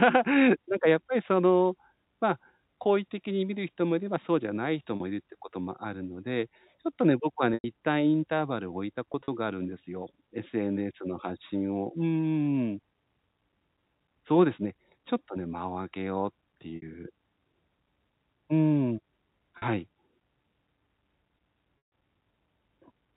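Speech over a telephone-band G.711 path shows packet loss with pitch repetition at 4.96, 7.54, 9.12 (scattered over 160 ms), 16.76, 19.58 and 21.78 s. Gaps of 40 to 140 ms, consistent with 20 ms packets, are bridged by repeated pitch periods that sound buzzy and held. On a waveform these appear as identical repeating cycles decaying toward silence, and on a spectrogram as frozen harmonics.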